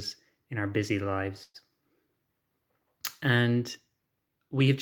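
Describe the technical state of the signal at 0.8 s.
At 0.8 s the speech signal is intact, with no technical fault audible at that moment.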